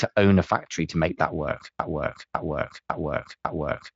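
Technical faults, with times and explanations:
1.79 s to the end, broken-record loop: right after "to make that work" a 0.55 s chunk repeats exactly four times back to back, so whatever should have come next is gone. The player or stream likely stalled and kept replaying the last fragment it held.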